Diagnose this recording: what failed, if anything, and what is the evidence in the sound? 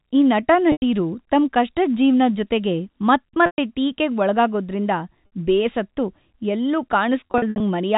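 Network packet loss with pitch repetition: at 0.72, 3.46 and 5.26 s, and scattered across 7.2 to 7.6 s, repeated pitch periods buzz briefly, with the longer gaps at 0.72 and 3.46 s fading into silence before the speech returns.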